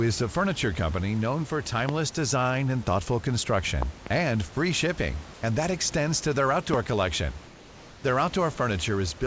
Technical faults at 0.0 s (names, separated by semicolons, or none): none